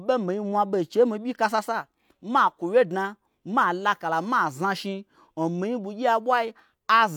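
No technical faults detected.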